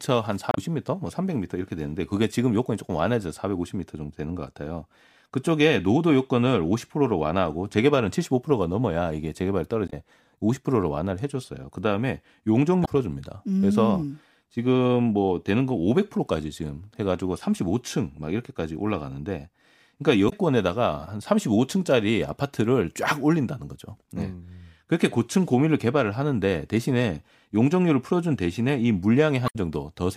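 Short bursts of damaged data in a compressed stream break into the speech at 0.51–0.58, 9.86–9.93, 12.82–12.88, 20.26–20.33 and 29.45–29.56 s, each lasting 66 to 106 ms. Corrupt bytes make the decoder misread frames and lose sync until it finds the next valid header, so each event is a chirp, squawk, click or short hole. A plain dropout would leave a gap of silence or a smoothed-over hole instead.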